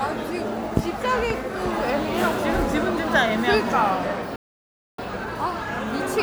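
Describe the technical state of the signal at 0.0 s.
At 0.0 s the signal is intact, with no technical fault present at that moment.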